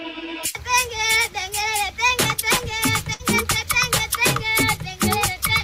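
At 3.13 s a burst of packet loss occurs. For about 60 ms the receiver conceals the gap by extending the last received sound and fading it down. Playback then resumes at 3.22 s, with roughly 60 ms of the original audio missing.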